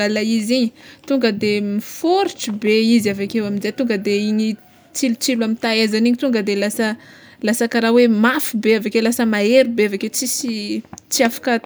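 No technical faults can be heard anywhere in the speech recording, with the signal arriving intact and steady throughout.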